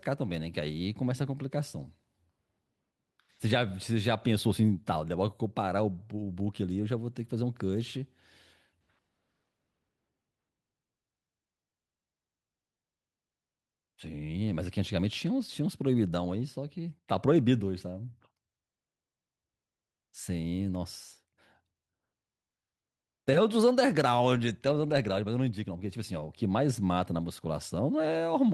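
No technical faults are audible.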